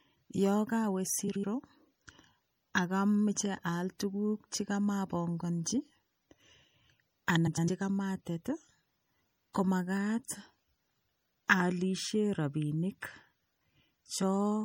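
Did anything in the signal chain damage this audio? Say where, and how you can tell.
Yes. MP3 compression at the codec stage runs throughout: watery, swirly treble and smeared attacks, likely from low-bitrate encoding around 64 kbps.

Frames out of order at 1.28–1.45 s and 7.47–7.69 s: network delivery swapped adjacent 78 ms and 105 ms blocks, producing garbled flutter.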